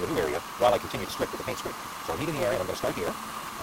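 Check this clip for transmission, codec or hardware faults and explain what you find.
One fault runs through the whole clip: a block size mismatch with truncation. One stage writes longer blocks than the next stage reads, which fits a 256-sample read. The end of each block is discarded. That gives a buzz at 172 Hz. The audio also runs 1.88 times fast at about normal pitch.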